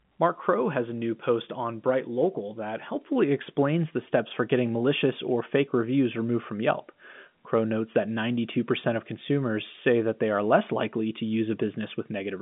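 No technical faults can be heard in the speech, which comes over a G.711 A-law telephone path at 64 kbps with the expected line band of 150 Hz to 3.5 kHz and nothing above 3.7 kHz.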